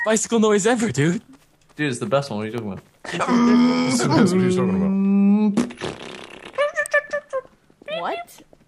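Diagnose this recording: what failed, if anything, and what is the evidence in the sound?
Two sharp snaps at 2.58 s and 6.86 s are electrical switching spikes picked up in the analogue wiring. Each is a brief burst riding on top of the sound, the second somewhat louder, peaking around -10 dBFS against roughly -15 dBFS for the first. On a spectrogram each shows as a thin vertical line spanning the whole frequency range, and on the waveform as a narrow spike. The likely cause is a nearby switch, motor or static discharge arcing into the signal line.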